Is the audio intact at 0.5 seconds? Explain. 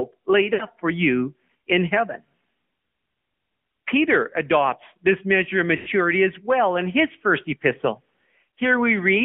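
No. The AMR narrowband mobile codec runs throughout. A vocal-tract model and sparse pulses, squeezed into a 150 Hz to 3.4 kHz band, make the sound plainly buzzy and synthetic, which points to about 10.2 kbps. Lost AMR speech frames follow from 0.54 to 0.65 s, about 60 ms, which fits three lost 20 ms frames. The decoder repeats the last good settings with falling gain, so the sound smears and fades before recovering roughly.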